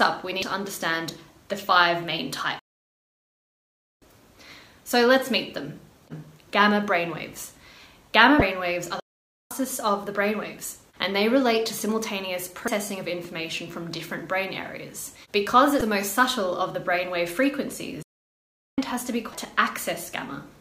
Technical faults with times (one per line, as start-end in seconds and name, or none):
0.39-0.43 damaged data in a compressed stream
2.59-4.02 playback stall
8.39-8.42 damaged data in a compressed stream
9.00-9.51 playback stall
12.65-12.68 damaged data in a compressed stream
15.78-15.81 damaged data in a compressed stream
18.02-18.78 playback stall
19.31-19.34 damaged data in a compressed stream